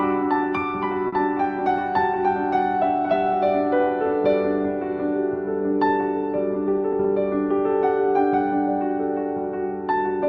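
A packet arrived late at about 1.07 s, the jitter buffer ran dry, and the receiver covered the gap by stretching the last sound for about 50 ms before resuming from the same point once the data arrived, so nothing is lost but playback runs about 50 ms later from then on. The result, between 1.07 and 1.14 s, is a short stall from a late packet: a briefly held sound with a faint buzz or dip, on a call path whose top end stops around 12 kHz, which fits Opus at about 40 kbps.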